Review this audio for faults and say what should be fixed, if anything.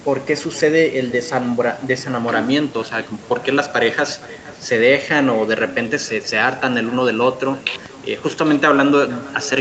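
Echo with no canceller runs through the whole clip: the far end is playing the call over a loudspeaker, its microphone is picking that playback up, and nothing on that side subtracts it before sending it back. The result is that every phrase of the speech returns about half a second later as a faint copy, about 20 dB down and thin. It trails each utterance like a ghost, under audio already band-limited to 8 kHz by the call path. Enabling acoustic echo cancellation at the far end, or having that participant use a headset, would stop the loop.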